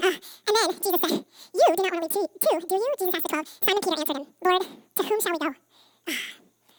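From the start to the end, the speech is audio read two samples at a time (double speed). Each pair of samples is consumed as one frame, so playback runs at 2.0 times normal speed and an octave high.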